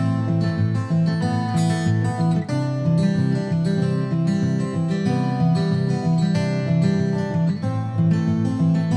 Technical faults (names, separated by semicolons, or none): none